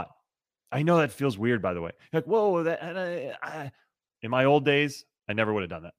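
Nothing goes wrong anywhere in this speech recording, so there's no fault to point to at any moment.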